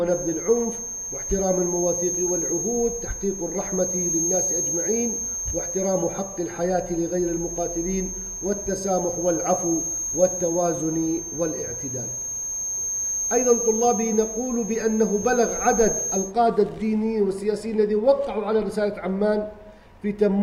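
From the very start until about 16.3 s there's a feedback whistle, a thin steady tone at 6.4 kHz sitting just under the sound and swelling and fading slowly in level. Most likely the speaker-to-mic loop was hovering right at the edge of feedback without tipping over.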